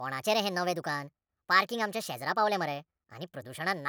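From start to finish the speech runs high and hurried, about 1.38 times too fast and roughly five and a half semitones sharp. That is wrong sample rate: audio recorded at 32 kHz is being played back at 44.1 kHz without conversion, so speed and pitch rise together.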